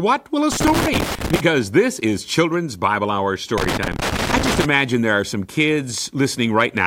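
From 0.52 to 1.40 s, just before "this is", and again from 3.58 to 4.65 s, ahead of "there are some", loose connector crackle breaks in: a worn contact intermittently opening and closing chops the speech signal, producing irregular bursts of scratchy crackle.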